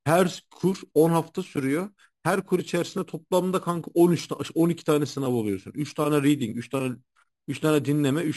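From start to finish, the speech carries imaging from sample-and-hold upsampling. Someone raised the rate from around 11 kHz to 48 kHz by just holding each sample, with no smoothing filter, so mirror copies of the spectrum sit above the old band. The first copy fills roughly 5.5 to 11 kHz, about 20 dB under the speech. You hear it as a metallic fizz riding on every syllable.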